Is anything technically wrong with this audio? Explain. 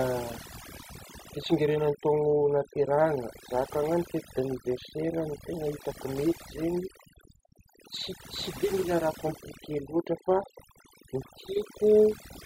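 Yes. Overdone noise removal runs throughout the speech: a noise reducer set too aggressively pulls individual frequency bands down near its noise estimate, taking quiet parts of the voice with them and leaving a lowered background that breaks up into twinkling, warbling specks.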